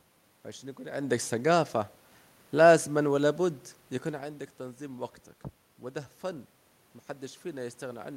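Nothing stood out on listening to this speech recording; the room noise and the shifts in level around 1 s and 4 s, where the talker moves relative to the microphone, belong to the recording itself.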